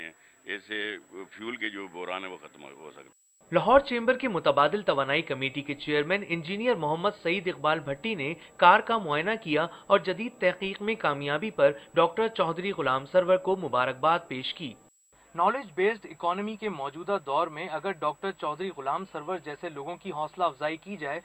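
From start to finish a switching supply whistle sits under the sound: a thin, high tone wandering between about 7.7 and 7.8 kHz, roughly 40 dB below the programme. A switch-mode power supply is cycling at a rate low enough to leak into the audible band, and that ripple couples into the signal path. On a spectrogram it appears as a narrow horizontal line near 7.7 kHz spanning the whole clip, wavering slightly; the waveform shows nothing visible.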